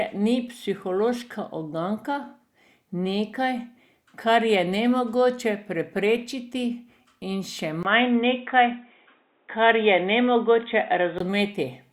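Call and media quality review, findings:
Speech goes dull and boxy at 7.83 s, back to full band at 11.2 s. Nothing above 3.8 kHz, 20 ms gap at the switch, faint new noise floor, level unchanged. Likely the input switched to a poorer device, a narrowband mic path, then back.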